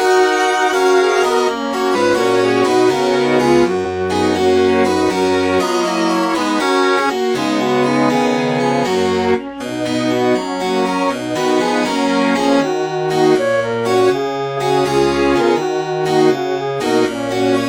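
At 1.91 to 1.96 s, at 3.81 s and at 15.38 to 15.41 s, damaged data in the compressed stream makes the decoder misread frames and lose sync until it finds the next valid header. Each event sounds like a brief chirp or blip in the audio.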